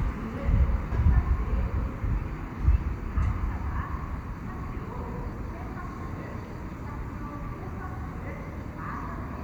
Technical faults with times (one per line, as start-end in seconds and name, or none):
none